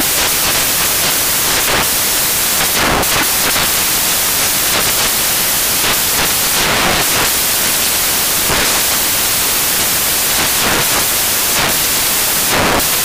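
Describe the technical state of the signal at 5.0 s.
At 5.0 s, as throughout, samples built from the wrong bytes turn low bits into loud, harsh broadband noise; unlike added hiss, it thins only where the original falls silent.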